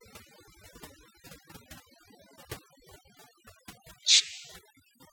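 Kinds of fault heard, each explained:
Overdone noise removal: background drops and breaks up into twinkling specks, from noise reduction set far too strong.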